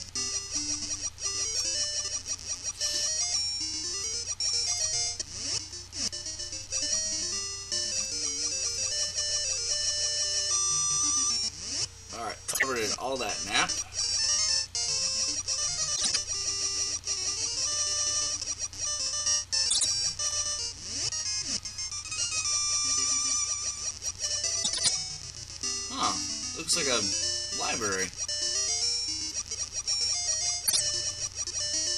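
Short garbled flutters occur at 12.48, 15.96, 19.69, 24.63 and 30.66 s, where frames out of order swapped neighbouring 52 to 105 ms blocks, with no time lost.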